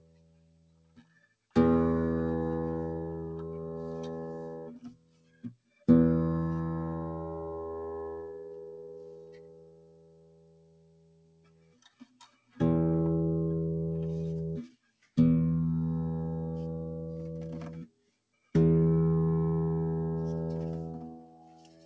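Throughout the clip a noise suppressor applied to music or sounds, a processor built for speech, keeps treating steady tones, ambience and decaying tails as noise. Its gain swings by around 20 dB, so the level pumps and flutters while attacks get through. On a waveform the envelope dips and recovers irregularly between transients. A spectrogram shows sustained bands fading in and out instead of running continuously. Above all this, the band stops cleanly at 8 kHz, which fits a wideband call codec such as G.722.

Sound cut by the noise suppressor appears as specific dips of about 16 to 18 dB. These fall at 0.0 to 1.35 s, 4.68 to 5.87 s, 8.29 to 12.6 s (the longest, about four seconds), 14.68 to 15.18 s, 17.69 to 18.54 s, and from 21.03 s to the end. In each, held or decaying sound sinks in level or has its tail chopped. These show as sudden hollows in the waveform and darkened gaps across sustained spectrogram bands.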